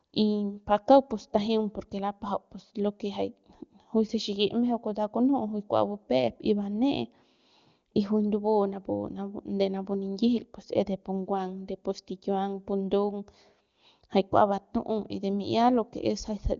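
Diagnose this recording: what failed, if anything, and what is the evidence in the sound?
Nothing failed; no fault is audible in this speech.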